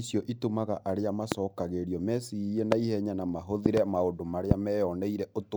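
Loud pops at 1.32, 2.72, 3.66–3.80 (a double) and 4.51 s jump well above the speech, likely voltage spikes from a switch, plug or static.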